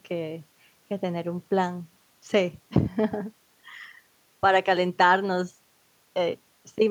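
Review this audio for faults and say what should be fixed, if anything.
Nothing needs fixing, as the speech signal holds steady throughout with no audible technical problems.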